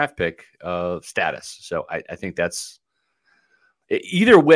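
No technical faults are audible.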